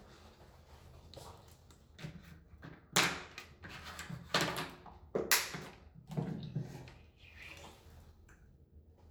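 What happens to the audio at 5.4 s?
Nothing goes wrong at 5.4 s; the audio runs on intact through that moment, with no dropout, click or other fault.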